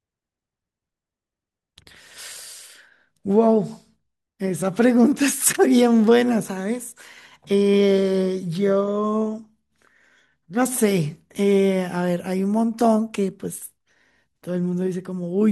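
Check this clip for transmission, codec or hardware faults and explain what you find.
No faults turn up anywhere in the clip when checked.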